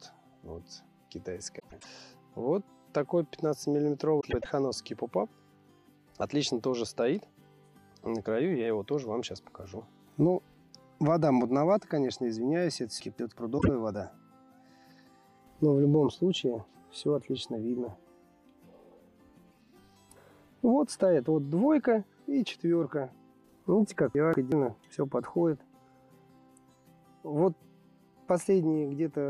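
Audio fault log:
1.59–1.86 s and 4.20–4.46 s: frames out of order. Two adjacent blocks of about 104.5 ms each, which fits runs of four roughly 26 ms frames, were decoded in swapped order. Each stretch plays its halves exchanged, giving a brief garbled flutter and no lost time.
13.00–13.38 s and 24.15–24.52 s: chunks out of order. One chunk of about 186 ms was delivered or written one chunk late, so it plays after its successor. Nothing goes missing, but the sequence jumbles briefly, and there are three hard joins.
13.58–13.69 s: frames out of order. Here only two single frames of about 26 ms trade places, so the exchanged halves make a very short flicker and no loss of time.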